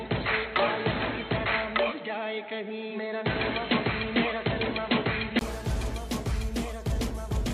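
For the first 5.41 s the sound is dull and boxy, with nothing above 4.2 kHz and a faint noise bed far below the signal. At 5.41 s there's a 20 ms dropout, then it opens up at the same level. That's most likely the input switching away from a poorer device.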